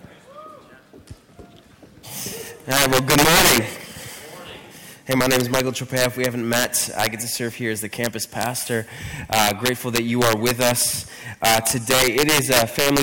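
Violent, harsh cracks on loud passages at 2.71–3.58 s (about 14 dB over), 5.12–5.60 s, 5.97–7.07 s, 8.04–8.46 s (about 1 dB), 9.33–10.82 s and 11.45–13.02 s (about 9 dB): integer overflow, where peaks wrapped to the opposite sign instead of being limited.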